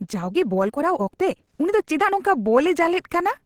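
A time-stretched section runs from 0.0 to 2.18 s: the speech is sped up about 1.37 times with pitch kept, likely by dropping short pieces, so it sounds rushed.

Opus compression, likely in its hybrid speech mode, colours the whole clip, leaving it audibly hoarse and grainy, which fits a rate near 16 kbps, though content still reaches about 20.2 kHz.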